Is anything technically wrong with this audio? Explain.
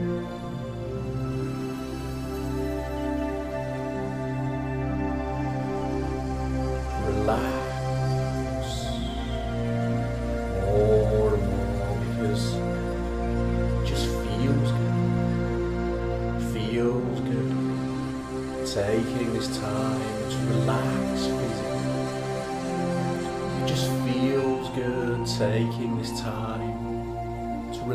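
No, nothing technically wrong can be heard in this audio. The sound stays steady and intact throughout, with nothing that points to a problem in how it was captured, transmitted or reproduced.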